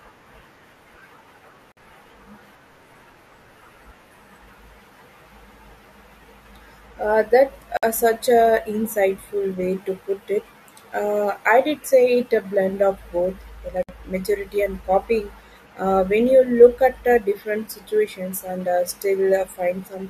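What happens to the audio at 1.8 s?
A gap at a join of encoded pieces runs from 1.72 to 1.77 s, about 51 ms long, with smeared edges that leave a shorter stretch of silence. Encoder delay and last-frame padding were left in when separately encoded pieces were joined. Unlike a dropout, the speech resumes exactly where it stopped, with nothing lost.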